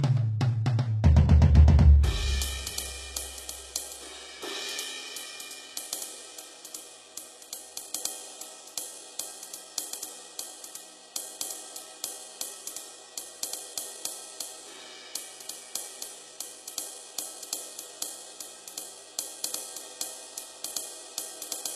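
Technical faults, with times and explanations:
Throughout, low-bitrate audio saved at a high bitrate: nothing above 12.3 kHz, a flat spectrogram ceiling, likely a low-bitrate first encoding re-saved as high-bitrate MP3.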